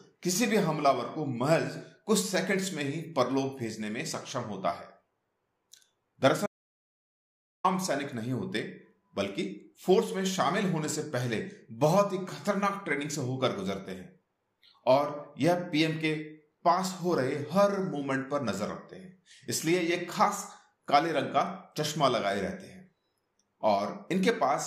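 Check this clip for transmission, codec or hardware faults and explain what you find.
There's one fault here: an audio dropout to silence from 6.46 s to 7.64 s, so roughly 1.18 s of material is simply gone. The sound cuts off mid-flow and then resumes just as abruptly, and the gap in between is silent, with no room tone or noise floor at all. The likely cause is the input being lost for a moment, through a disconnect, a broken link or a mute, while the recorder kept writing silence.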